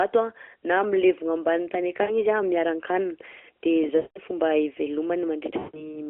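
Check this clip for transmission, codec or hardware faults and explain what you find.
Yes, there's one kind of fault here: lost AMR speech frames, with three dropouts over a narrowband line of about 300 Hz to 3.4 kHz that fits the 12.2 kbps AMR mode.

Lost AMR speech frames occur at 2.02–2.11 s, right after "na milevogna ambany tany"; at 3.96–4.18 s; and at 5.58–6.01 s. Corrupted frames made the decoder repeat the last good pitch and tract settings with falling gain. The short gap is drawn out, while the longer two smear out and fade toward silence before the sound returns thin and rough.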